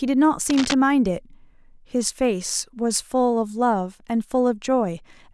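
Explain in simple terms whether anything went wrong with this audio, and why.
Right near the start of this speech clip, from about 0.50 to 0.74 s, there's a quick burst of scratchy, rustling noise sitting on top of the voice. That's cable scratch noise, and it's clearly quieter than the speech itself. The likely cause is a worn cable, plug or knob getting nudged. Its electrical contact flickers rapidly for that quarter of a second, and the signal picks up those uneven crackles.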